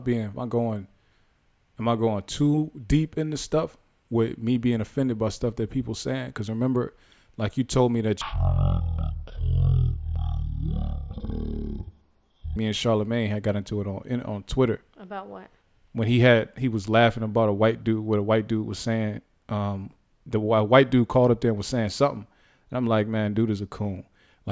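From 8.22 to 12.56 s, after "like you told me", a wrong sample rate plays the speech too slowly: it drops to 0.363 speed and 17.6 semitones lower together. A plain pitch shift would keep the tempo.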